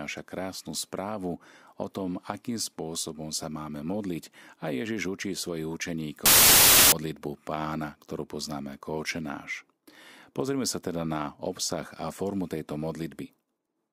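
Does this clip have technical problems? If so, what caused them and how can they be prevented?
Yes. From 6.26 to 6.92 s, samples built from the wrong bytes turn the speech into loud, harsh broadband noise. Misaligned or swapped bytes make the low bits dominate. Check byte order and sample alignment when reading.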